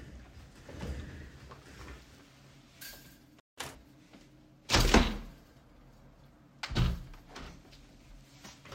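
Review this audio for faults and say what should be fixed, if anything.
A playback stall cuts the sound to silence from 3.40 to 3.58 s, a gap of about 174 ms, before it resumes. The likely cause is the player's buffer running dry or its output thread being blocked, so no samples reached the device during that interval. To prevent it, give the playback buffer more headroom and keep the audio thread free of blocking work.

A catch-up at higher speed follows immediately, from 3.58 to 3.75 s, where the audio runs at 2x speed and its pitch jumps up by around ten semitones. The player is resampling its backlog to recover the lost time, then snapping back to normal rate. To prevent it, drop or crossfade the backlog instead of speeding through it, or use time-stretching that preserves pitch.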